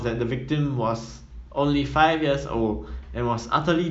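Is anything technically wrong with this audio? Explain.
No, nothing technically wrong can be heard here.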